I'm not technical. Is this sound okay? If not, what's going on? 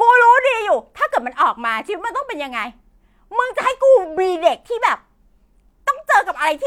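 Yes, nothing wrong turns up anywhere in this recording, so there's nothing to fix.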